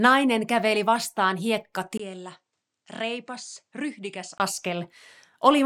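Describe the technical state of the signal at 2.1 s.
At 2.1 s the recording's input has likely switched to a poorer device, a fault that runs from 1.98 to 4.40 s. The new capture path passes nothing above 9.6 kHz, so the speech loses its top end and turns duller. It also arrives roughly 10 dB quieter and carries a faint new noise floor of its own, well below the speech. A brief 20 ms silence marks the switch at 1.98 s.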